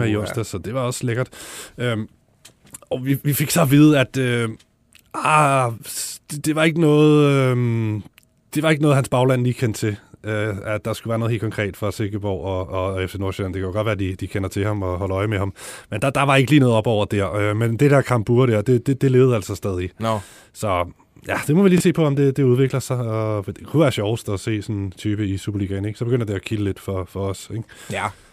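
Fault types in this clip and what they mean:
Repeated buffer, 21.78 to 21.80 s: fresh audio arrived late, so the playback device replayed its previous block once. A 23 ms slice sounds twice with a hard seam, heard as a brief stutter-click, which fits a 1024-sample buffer. About 20 ms of new audio is lost.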